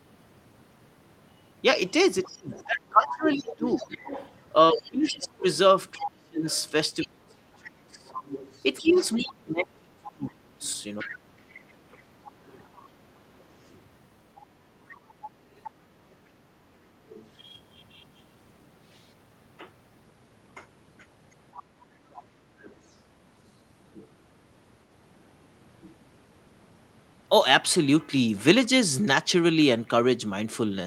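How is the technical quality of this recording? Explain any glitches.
The recording has echo problems. The far end of the call comes back through the microphone, and the main talker's speech is pushed down whenever both sides talk at once.

Other side's voice leaking through occurs from 2.23 to 7.08 s and from 8.08 to 16.13 s, sitting only modestly below the talker. Fainter scraps follow at 17.09 to 17.27 s and 21.56 to 22.94 s. The likely cause is residual loudspeaker echo that the echo canceller failed to remove from the microphone.

Speech suppressed in double talk spans 2.27 to 11.11 s, with about five seconds of the talker's speech dipping, at worst nearly muted. A brief dip follows at 22.39 to 22.51 s. This is likely the canceller confusing near speech with echo and attenuating both while the far side talks.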